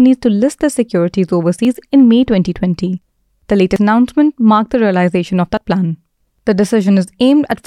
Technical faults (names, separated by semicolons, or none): dropped buffer (overrun)